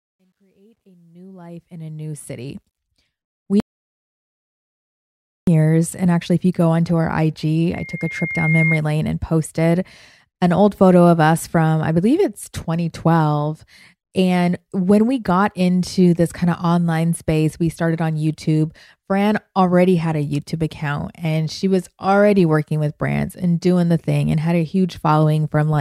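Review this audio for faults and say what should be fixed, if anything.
Truncation distortion on a fade runs from 0.0 to 2.78 s, during the opening fade-in, and is worst from 0.0 to 1.08 s. The level ramp was computed with too few bits and no dither, which fits a 12-bit stage. At the quietest part, the speech is reduced to a few coarse amplitude steps, so it sounds gritty before clearing up as the fade rises. To prevent it, apply fades at 24-bit or floating-point resolution and dither when reducing bit depth.

An audio dropout to silence runs from 3.6 to 5.47 s, about 1.87 s of silence. The speech stops abruptly and restarts mid-flow, and the gap has no room tone. The recorder kept writing samples after its input disappeared, and the likely cause is a lost connection, a failed link or an accidental mute. The speech during the gap is gone. To prevent it, secure connections and mutes, and monitor input levels during recording.

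A loudspeaker feedback squeal runs from 7.73 to 8.82 s. It is a single 2.1 kHz tone that builds over about a second until it is roughly as loud as the speech. The microphone was picking up a loudspeaker in its own feed, and at 2.1 kHz the loop gain rose above one, so that frequency kept growing. To prevent it, keep microphones out of the loudspeaker's coverage, lower the monitor gain, or notch out 2.1 kHz.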